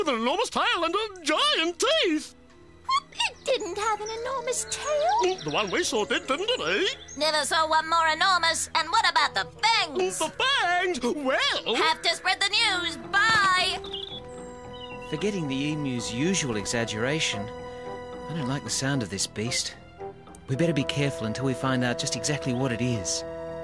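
The audio has no audible technical faults.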